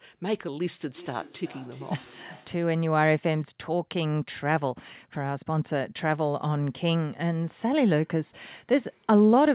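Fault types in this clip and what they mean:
Feedback echo between two devices: from 0.95 to 2.69 s the speech returns as a faint, thin, ringing repeat roughly every 0.4 s, peaking at about 22 dB below the speech, within the same band-limited sound that stops at 4 kHz. A second device in the room is playing the call aloud. A nearby microphone picks that up and sends it round again, and neither echo canceller removes sound its own device did not play.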